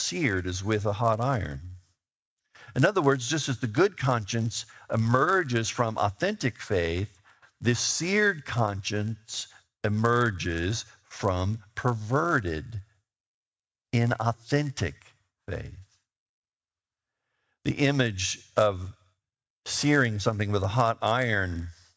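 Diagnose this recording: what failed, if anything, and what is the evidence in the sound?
Sample-rate conversion: a 100 Hz buzz throughout, present only with signal, unlike mains hum. The resampler restarted on every block, erring at each 10 ms block edge.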